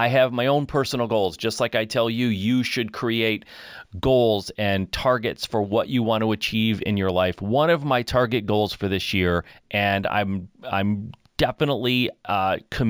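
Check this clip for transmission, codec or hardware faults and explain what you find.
One fault runs through the whole recording. Imaging from linear upsampling is present throughout. The speech was raised from 16 kHz to 44.1 kHz by joining samples with straight lines, a weak filter. This dulls the top of the band and leaves a mirrored copy of the spectrum between 8 and 16 kHz, roughly 30 dB down, heard as a faint metallic shimmer on sibilants.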